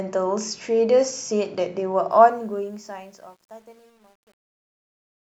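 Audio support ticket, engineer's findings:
Truncation distortion on the fade-out, 2.11 s to end, worst 2.84–5.28 s. Fade starts around 2 s, but the tail turns gritty. Probable component: undithered fade/gain stage; step size fits a 10-bit path. Waveform: quiet tail collapses into square steps. Spectrogram: broadband grit and harmonic hash over the speech.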